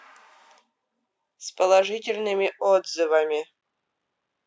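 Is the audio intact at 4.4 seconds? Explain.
Yes, the speech at 4.4 seconds is intact, with no fault at that moment beyond the expected effect of call microphone processing, whose high-pass filter trims the lowest bass as a normal part of that path.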